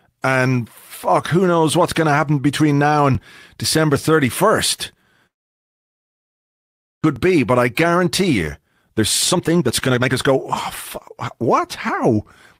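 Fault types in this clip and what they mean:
long network dropout: From 5.27 to 7.06 s the sound stops and nearly 1.8 s of near silence follows before it resumes with about a second of material gone for good. That gap most likely comes from packets failing to arrive and the receiver having nothing to play.
overlapping chunks: At 7.17 s there is a brief click or stutter where 12 ms of audio plays twice. The stream is handled in 4 s chunks, and this join starts slightly before the previous chunk has finished.
jitter buffer speed-up: From 8.59 to 10.32 s the speech rushes at 136% speed with unchanged pitch, and 11.42 to 12.18 s runs slightly fast at 104%. The receiver trims pitch-period slices to drain excess buffered delay, roughly 0.7 s in the first stretch.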